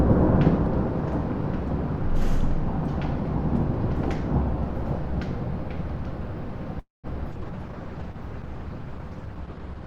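From 6.79 to 7.07 s the sound stretches into a fading buzz and then drops to silence for about 170 ms before resuming where it stopped, with nothing lost. This call audio freeze was likely caused by delayed packets draining the jitter buffer, which added roughly 240 ms of delay.

From 7.35 s to the end the sound turns rough and duller, losing its top end. This is a call bitrate drop. The encoder fell from 64 to 13 kbps, coding more coarsely and narrowing the bandwidth from 20 kHz to 12 kHz.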